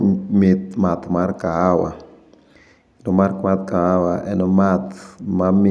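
A short bit of speech, and nothing technically wrong turns up anywhere in it.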